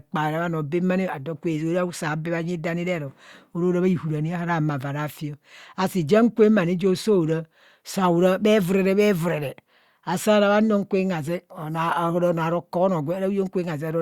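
No technical faults occur at any point in this speech recording, so there is nothing to describe in time order.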